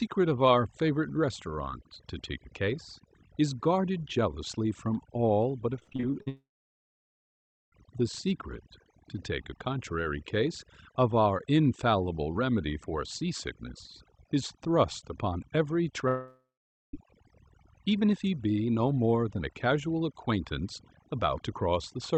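Throughout the recording, overdone noise removal makes the background drop and break up into twinkling specks. The suppressor has been pushed so hard that individual frequency bands near its noise estimate are pulled right down, taking the quiet parts of the voice with them. That bubbly, fluttering texture sets it apart from the plain high-frequency cut-off above 8 kHz that the call codec imposes. The codec dulls the top end but leaves no specks.

From 5.79 to 6.28 s, repeated packet loss makes the sound choppy and robotic. Eight short holes, none longer than about 43 ms, are each patched by stretching the preceding sound, so roughly 38% of that half-second is synthetic filler. The sound keeps returning between holes, which distinguishes this from a single dropout. The result is a stutter rather than one continuous gap.

At 6.28 s the audio trails off into a fading buzz and then goes silent for about 1.3 s before returning at 7.74 s, with that stretch missing. 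A second, shorter break runs from 16.08 to 16.95 s: roughly a third of a second of decaying buzz, then about half a second of silence. Both are likely long network dropouts. Unlike the packet-loss stutter, the signal stops completely instead of breaking up into fragments.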